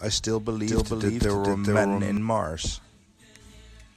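From 0.67 to 2.17 s, a doubled audio track appears, likely from a second, slower capture path or an edit leaving two copies out of step. A full-band copy at about the same level trails by roughly 0.4 s, dry, switching on and off abruptly.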